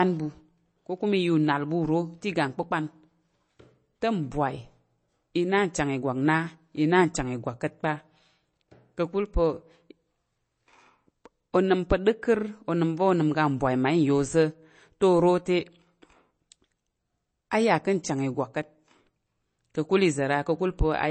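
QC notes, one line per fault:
Throughout, MP3 compression: the speech has nothing above 8.3 kHz, so sibilants sound dull and clipped, and a watery, swirling texture runs under the whole clip. The likely cause is a heavily starved MP3 encode, which fits a bitrate around 32 kbps. With so few bits, the encoder drops the treble at a fixed cut-off and zeroes quieter frequency lines, which then flicker on and off between frames and smear consonant onsets.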